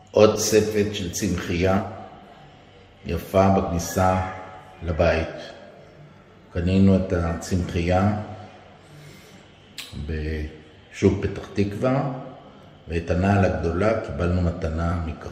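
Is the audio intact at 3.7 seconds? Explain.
No. At 3.67 s, compressed frames were skipped: whole frames never reached the output, either missing from the file or rejected by the decoder as damaged. Roughly two frames, around 40 ms of audio, are gone, which fits a 20 ms frame length. The sound jumps forward by that amount.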